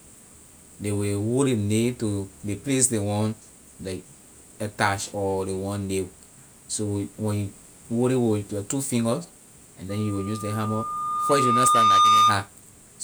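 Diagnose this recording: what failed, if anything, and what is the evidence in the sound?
Loudspeaker feedback squeal in the analogue acoustic loop: after "your two finger and", a 1.2 kHz tone swells from 9.89 s over about two seconds to about 10 dB above the speech, ending at 12.47 s. The microphone hears its own loudspeaker at above-unity gain. A steady interfering tone would start at full level instead of growing.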